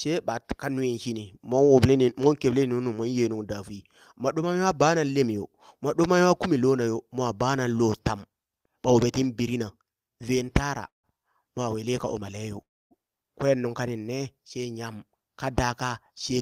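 Speech is interrupted twice by call audio freezes. At 10.87 to 11.22 s, right after "tin birina ven tara", the last sound stretches into a short fading buzz, then about 0.14 s of silence, before "mwa wili ka umaleyo" resumes. At 12.61 to 12.94 s, just after "mwa wili ka umaleyo", a similar fade is followed by about 0.27 s of silence. The likely cause is packets held up in transit, so the jitter buffer ran dry and the receiver covered the gap. Nothing is lost; the delay grows by about 0.16 s and 0.3 s. From 15.62 to 16.38 s, after "nyam ka", the speech sounds slightly hurried at the same pitch, running at 107% speed. This is a jitter buffer speed-up: the buffer held too much audio and trimmed about 70 ms as many tiny pitch-period slices to catch up.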